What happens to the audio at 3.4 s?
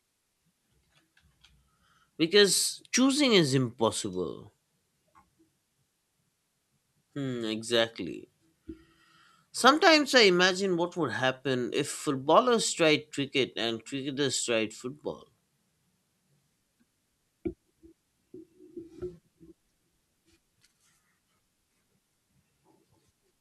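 Nothing goes wrong at 3.4 s; the speech carries on intact through that moment, with no dropout, click, distortion or other fault.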